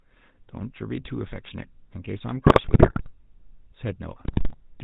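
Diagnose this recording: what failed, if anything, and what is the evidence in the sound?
Buzzy, gravelly speech with nothing above 4 kHz throughout points to the codec stage: GSM full-rate coding, consistent with 13 kbps, rebuilds the voice from a sparse pulse excitation.

Squawks, pops and gargling at 2.46–3.11 s and 4.24–4.55 s are GSM bit errors on the network link, where corrupted filter, pitch or gain values distort the decoded frames.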